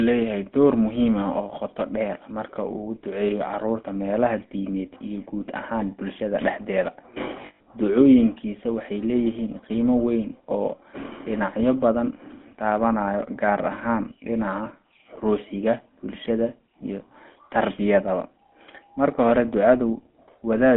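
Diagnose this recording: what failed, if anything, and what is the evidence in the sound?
The whole clip has a buzzy, gravelly roughness, and the band runs from 200 Hz to 3.5 kHz. This is the GSM full-rate codec at the codec stage. Its pulse-driven vocal-tract model coarsens the excitation, which fits roughly 13 kbps GSM.

From 7.42 to 7.67 s, right after "guud ahaan bulshada dhexdeeda", the sound freezes into a rough, metallic ring. These are lost GSM frames from the network: about 180 ms went missing across 240 ms, with the longest gap around 150 ms. The decoder kept repeating the last good frame.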